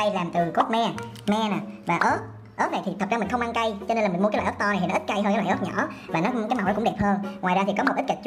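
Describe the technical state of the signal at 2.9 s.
At 2.9 s the signal is intact, with no audible fault at that point.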